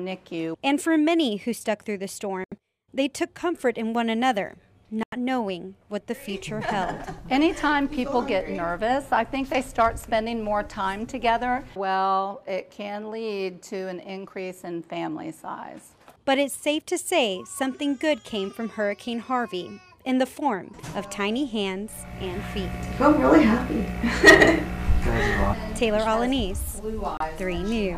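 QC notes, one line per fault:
2.44–2.55 s, 5.03–5.17 s, 27.17–27.21 s: Bluetooth dropout, likely. The sound drops to silence with abrupt or briefly faded edges and resumes further along, as though it had kept playing. This fits wireless packets arriving too late and being discarded, consistent with roughly five, six and two lost frames.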